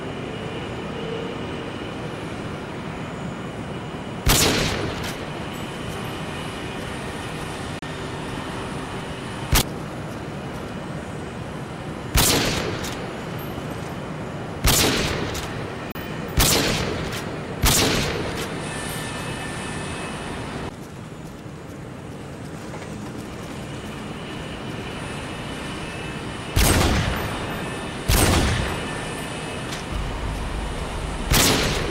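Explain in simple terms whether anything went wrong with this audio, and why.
Two digital broadcast dropouts: the sound briefly cuts to silence at 7.79–7.83 s and 15.92–15.96 s, because the receiver muted about 32 ms of damaged signal, consistent with one lost frame each time.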